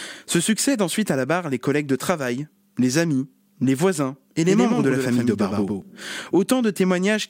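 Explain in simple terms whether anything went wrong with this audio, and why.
Just after "amis les voisins et", from 4.48 to 5.82 s, the speech briefly sounds doubled, with a quieter echo trailing about a tenth of a second behind. This doubled audio track is likely caused by the same sound being recorded twice through a slower path.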